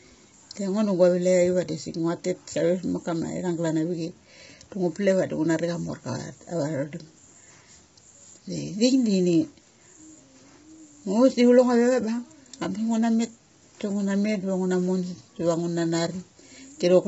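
From start to finish the speech sounds rough and grainy, with a hissy fill between the harmonics and nothing above 7.7 kHz. That's likely heavy low-delay AAC compression, AAC-ELD's short frames smearing pitch detail at a low bitrate, around 16 kbps.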